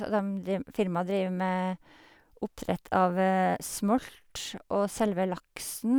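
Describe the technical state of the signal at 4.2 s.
The signal at 4.2 s is intact, with no audible fault in the speech at that point.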